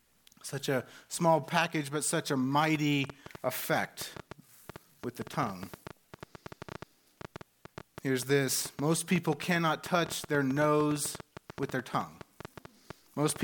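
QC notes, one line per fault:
2.75–13.42 s, train of clicks. A run of sharp pulses, around seventy in all, ticks and pops over the sound from 2.75 s almost to the end. They arrive at about 7.7 per second, but the spacing is irregular, so the ticking stumbles rather than keeping a steady beat. Each click has much the same shape. The loudest peak at about 5 dB above the sound, and they stay audible in pauses. The likely cause is interference from nearby equipment or a faulty connection or power supply.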